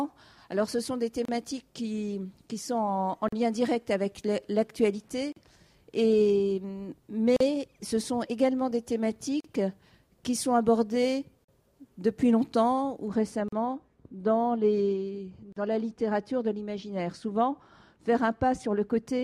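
At 1.25 s a short dropout of about 32 ms opens in otherwise continuous sound, followed by 40 ms dropouts at 3.28, 5.32, 7.36, 9.40 and 11.44 s, recurring roughly every 2 s. These are gaps at the joins of encoded pieces. Each piece was encoded on its own and spliced without trimming, so the encoder's start-up delay and last-frame padding remain as silence. The edges are smeared by the codec, and the sound resumes where it left off.

From 13.08 s to the end, the audio turns dull and muffled. This is de-emphasis applied wrongly. A treble-cut filter meant to undo pre-emphasis has been applied where none existed, or a second time. It tilts the response smoothly downward, leaving 10 kHz about 13 dB below 1 kHz. Within this muffled stretch, the same 40 ms join gaps continue at 13.48 and 15.52 s.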